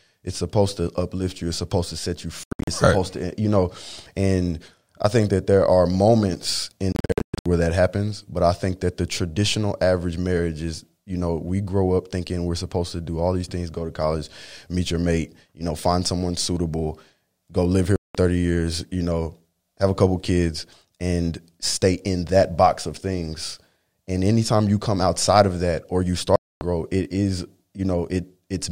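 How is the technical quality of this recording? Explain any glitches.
The recording is marred by four short Bluetooth dropouts, most likely from audio packets reaching the headphones too late to be played and being discarded. The output falls silent with abrupt edges or a fade of a few milliseconds, then resumes as if time had run on. They occur at 2.43–2.68 s after "supposed to set you", 6.92–7.46 s, 17.96–18.15 s between "suitable go live here" and "years you know have", and 26.36–26.61 s before "it is". The first two break into several gaps, the longest being 80 ms and 120 ms.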